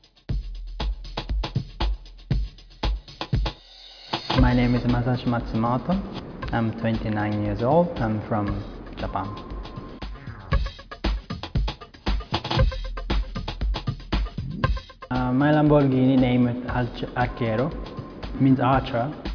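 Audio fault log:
No faults detected.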